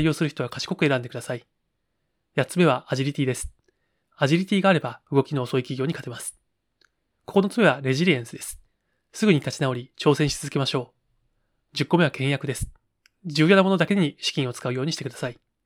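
Nothing stood out on listening to this speech recording.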